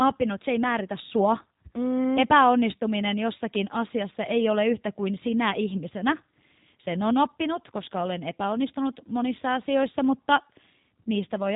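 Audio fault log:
throughout, G.729 codec: plainly audible roughness and a synthetic, buzzy edge on the speech, with the top end cut off at 4 kHz. The coder resynthesises each 10 ms frame from a filter model, pitch prediction and sparse pulses, which fits G.729A at 8 kbit/s.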